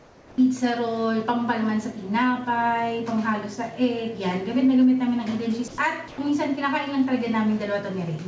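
For the first 0.38 s the real background gets swapped for flat, featureless comfort noise about 4 dB quieter, likely the sender's discontinuous transmission filling the pause. Then at 5.68 to 5.78 s and 6.08 to 6.18 s, the voice detector drops sound, likely mistaking quiet bits for background: roughly 60 ms and 40 ms vanish into steady noise before it kicks back in. All of this comes through a G.722 call path, so nothing sits above 8 kHz.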